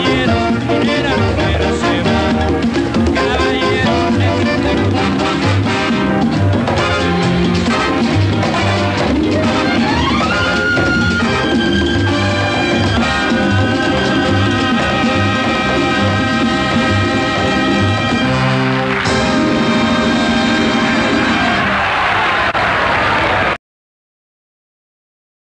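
No technical faults are audible.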